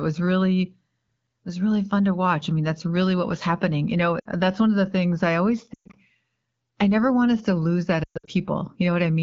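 Speech over a wideband AMR (HD Voice) link, lightly coded in a way that points to about 12.65 kbit/s, with lost AMR speech frames at 4.19–4.26 s, 5.74–5.96 s and 8.03–8.30 s. The first, about 60 ms, drops quickly to near silence. The later two are scattered losses with runs of about 120 ms. There the decoder holds the last pitch with falling gain, fading the sound to near silence within two frames before the voice returns rough. Unlike a hard dropout, each gap begins with briefly decaying voice rather than an instant cut to silence.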